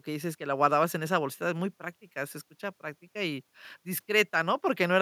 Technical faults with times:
none

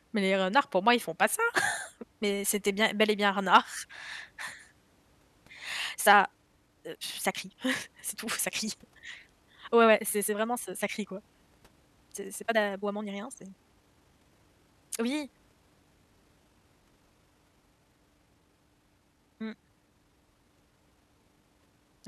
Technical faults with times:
5.88-22.08 time-stretched section

